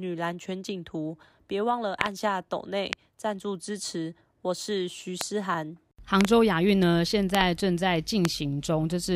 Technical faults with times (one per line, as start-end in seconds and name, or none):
2.01-2.08 loud pop
2.93-2.95 loud pop
5.21-5.23 loud pop
6.21-6.27 loud pop
7.35-7.43 loud pop
8.25-8.27 loud pop